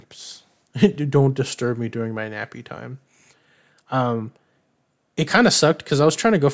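No technical faults can be heard anywhere in the speech recording.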